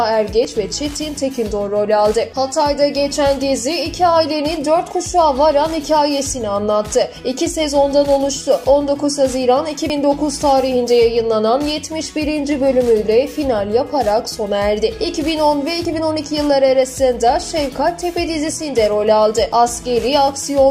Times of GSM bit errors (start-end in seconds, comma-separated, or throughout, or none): none